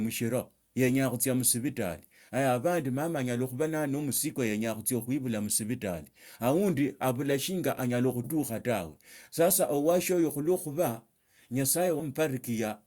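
At 11.99 s compressed frames are skipped: roughly 70 ms of speech is never decoded, which fits about four 20 ms frames. The audio jumps ahead at the join, visible as a small waveform discontinuity and a narrow vertical smudge on the spectrogram.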